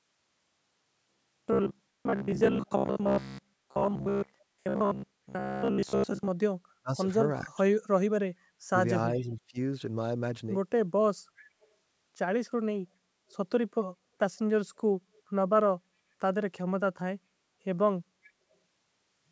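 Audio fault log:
0.02 to 6.29 s, robotic sound from repeated short buffers: a rigid metallic buzz at about 66.8 Hz, likely from most of the audio being replaced by repeats of a short stretch, which fits a roughly 15 ms buffer.
4.39 to 4.44 s, 9.18 to 9.22 s, 11.37 to 11.67 s, 13.30 to 13.35 s, 18.23 to 18.31 s, echo leak: faint scraps arrive 404 ms after the original, about 30 to 40 dB below the speech, likely from a loudspeaker's echo canceller letting some of the sound through.
6.79 to 7.72 s and 8.67 to 9.58 s, speech suppressed in double talk: the talker dips by up to about 30 dB and 25 dB, for roughly 0.4 s in each span, likely because an echo canceller ducked both sides during overlapping talk. This is a loss of level rather than an added copy.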